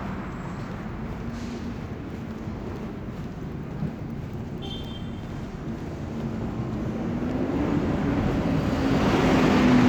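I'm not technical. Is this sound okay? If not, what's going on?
Yes, it's fine, no faults.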